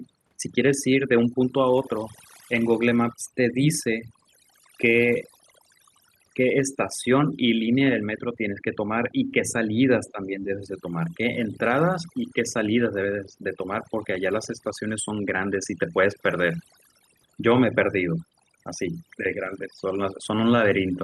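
From the start and all the way through, there's overdone noise removal. The suppressor is clamping any frequency band that sits near its noise estimate, so the background drops and breaks up into little twinkling specks. The quieter parts of the speech get pulled down too.

Between 10.12 and 10.62 s, the speech suddenly ducks in pieces by something like 10 dB at its deepest, for about a third of a second in total. That's speech suppressed in double talk, likely the echo canceller turning everything down while both ends talked at once.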